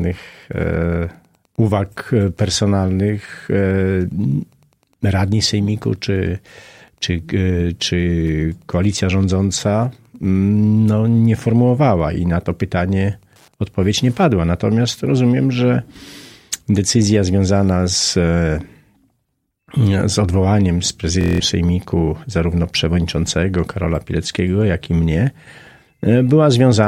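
Wi-Fi interference runs from the start to 14.24 s. A nearby Wi-Fi radio's transmissions are rectified by the audio circuit, so its beacon, repeating every 102.4 ms, leaves a faint, steady ticking about ten times a second, roughly 45 dB below the sound.

Bluetooth stutter occurs from 21.21 to 21.40 s. Audio data arrived late or not at all, and the receiver replayed its last buffer for about 186 ms, a gap that fits roughly eight lost packets. The result is a brief buzzing, machine-gun repeat before the sound resumes further along.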